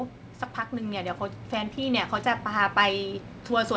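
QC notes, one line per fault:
0.7 to 2.06 s, automatic gain rising: the level of the speech and the background noise under it climbs together by about 4 dB over roughly 1.4 s, with no abrupt step. This is the gain control judging the input too quiet and raising its gain gradually, so everything in the signal path swells at once rather than the talker getting louder. The rise sits within band-limited call audio that stops at 8 kHz, consistent with a G.722 wideband codec.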